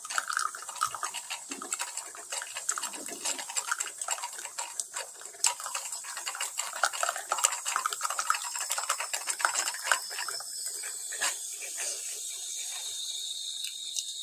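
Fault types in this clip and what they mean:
Sound cut by the noise suppressor: from 5.07 to 5.43 s the suppressor mistakes the sound for noise and dips it by about 4 dB.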